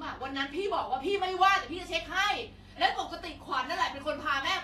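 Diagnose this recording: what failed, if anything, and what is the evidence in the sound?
Codec stage: the speech carries plainly audible Vorbis compression artefacts throughout, likely from low-rate encoding consistent with about 32 kbps. The treble is hissy and grainy, consonant attacks are blurred, and nothing is present above 14.2 kHz. Coarse residue quantisation has turned high-frequency detail into noise.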